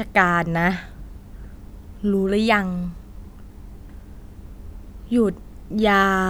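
A likely dropped buffer (overrun) lost samples and spliced the speech directly, causing small skips at 2.84 s (about 5 ms) and 4.29 s (about 10 ms).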